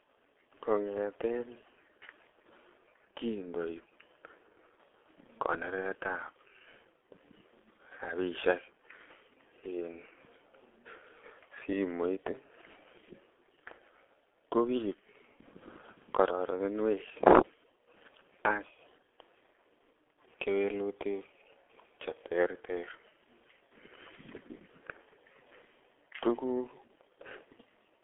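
Throughout this speech clip the sound is muffled and hoarse, with smeared consonants and nothing above about 3.4 kHz or below 300 Hz. This is heavy G.723.1 codec damage: coarse 30 ms frames and a sluggish voice model at what sounds like roughly 6 kbit/s.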